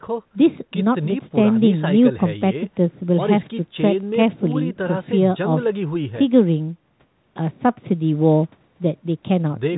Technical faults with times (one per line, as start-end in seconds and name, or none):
none